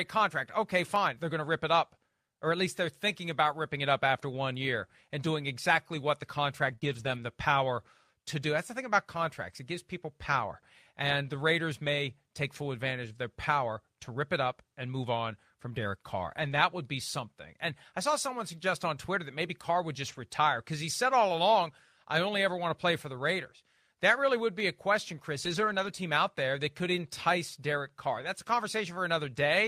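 Lost packet rebuilt from error correction at 0.35–0.37 s: a 20 ms stretch of speech was lost in transit, and the decoder played a low-bitrate copy carried in the following packet. There is no gap, just a brief patch that sounds rougher and grainier than the surrounding audio.

Dropped samples at 0.96 s: a tiny fraction of a millisecond is missing, so the waveform jumps straight to a later value. This produces a single sharp click, likely from samples lost in the capture or transfer path.

Repeated packet loss (robotic sound) from 6.67 to 7.20 s: three short holes, the longest 19 ms, were each patched by extending the previous sound. The fills follow each other closely, giving a choppy texture with small pieces of speech missing.

Further lost packets rebuilt from error correction occur at 11.86–11.88 s (20 ms) and 16.32–16.58 s (140 ms). The longer one is a sustained rough, noisy stretch rather than a dropout.

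Another click from dropped samples comes at 19.91 s.

A 60 ms error-correction rebuild runs from 20.08 to 20.18 s, just before "retire because he said".

A third click from dropped samples falls at 24.60 s, between "really would" and "a question".

The longest error-correction rebuild spans 25.44–25.90 s, just before "team out there that". It covers 240 ms, which fits a run of about twelve 20 ms packets, and is heard as a prolonged coarse, degraded passage.

A last 40 ms rebuild from error correction sits at 28.20–28.26 s.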